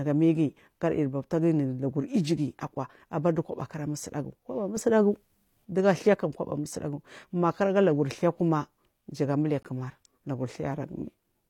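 A speech recording with two kinds of technical fault. A gap between stream segments appears twice: a hard-edged silence of about 6 ms at 3.61 s, and a longer one of about 18 ms from 9.63 to 9.65 s. Each is a brief dropout where the sound simply stops and restarts, with no audio lost. On a waveform these show as flat notches with vertical edges. On a spectrogram they are thin, fully blank vertical stripes across all frequencies. The two holes are about 6 s apart, which fits timestamps that leave a small gap at each 6-second segment boundary, filled with silence by the player. There is also a sudden gain jump. From 4.77 to 5.65 s the speech and the background noise together step up by about 7 dB, then drop back. The level changes abruptly at each edge rather than ramping. On a waveform the envelope visibly widens and narrows in a block, and on a spectrogram the whole band, noise floor included, brightens for that stretch. 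The likely cause is a digital gain setting applied from one sample to the next without smoothing.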